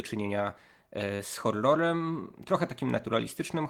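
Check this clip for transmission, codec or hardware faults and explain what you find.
One fault: short concealed packet loss at 1.15–1.21 s, just before "z horrorem trochę". About 40 ms never arrived, so the decoder extended the preceding speech, giving a brief smear rather than the silent gap of an unconcealed dropout.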